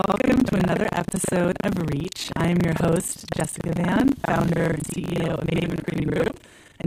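Throughout the clip, buffer tearing gives the speech a robotic 25 Hz rattle. Writer and reader cross inside every period, so most of each buffer replays audio from a lap earlier. Unlike a steady hum, the rattle stops in pauses. From 2.68 to 2.73 s, a wireless microphone noise hit adds a brief burst of static as the radio signal fades. It is hiss rather than a dropout's silence.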